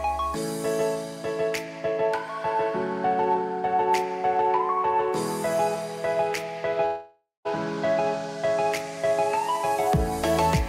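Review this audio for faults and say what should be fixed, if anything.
From 6.85 to 7.47 s there is a long network dropout: the audio breaks off and the last sound is stretched into a fading buzz, then about 0.17 s of near-silence before the sound resumes with roughly 0.6 s never recovered. On a spectrogram this shows as smeared, repeating horizontal bands that dim into a blank column; the waveform shows a decaying envelope, then a flat line. The likely cause is packets lost in transit. Prevent it with a larger jitter buffer, forward error correction or retransmission on the link.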